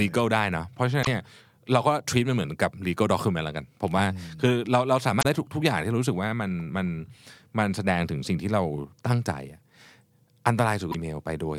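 Damaged data in a compressed stream breaks this speech recording at 1.01–1.07, 5.19–5.25 and 10.88–10.95 s: corrupted frames make the decoder lose sync, producing brief glitches.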